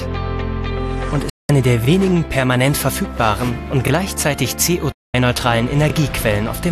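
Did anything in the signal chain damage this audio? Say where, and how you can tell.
Yes. A digital broadcast dropout at the reception stage mutes the audio from 1.30 to 1.50 s and again from 4.92 to 5.14 s. Each gap fades out over about 3 ms and removes roughly 192 ms and 216 ms of programme. That fits eight and nine corrupted 24 ms frames being muted until valid ones returned.

Overlapping chunks at the buffer stage cause short stutters at 1.85–1.88 s, 3.88–3.90 s and 5.90–5.93 s, about 2 s apart. Each chunk begins about 25 ms before the previous one ended, so that slice of sound plays twice at every join.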